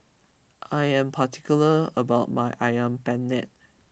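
No technical faults can be heard anywhere in the speech.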